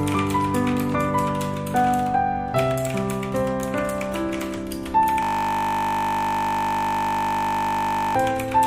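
From 5.23 to 8.16 s, a system hang loop repeats one 20 ms slice about 146 times, a steady 50 Hz buzz rather than a slower, audible stutter.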